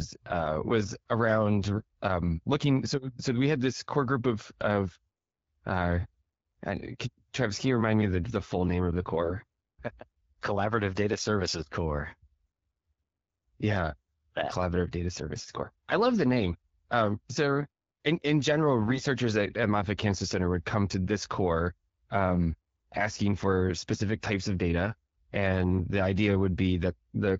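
Short bursts of AMR bit errors break into the speech at 1.76–1.83 s, 9.22–9.34 s, 15.36–15.58 s, 18.82–19.00 s and 23.91–24.00 s. Bits in the lightly protected part of the frames arrived flipped, roughly one in twenty, and about one in fourteen in the first burst, so the decoder placed excitation pulses wrongly and misread fine gain and spectral values. Pitch and level hold roughly steady while the sound turns hoarse and gargly. The longest burst, at 15.36 s, points to about ten damaged 20 ms frames. On a spectrogram, harmonics smear into grainy noise in those patches, and the waveform turns jagged without dropping in level. Around them, the AMR-WB link at 12.65 kbit/s carries the speech clearly, with only light coding damage.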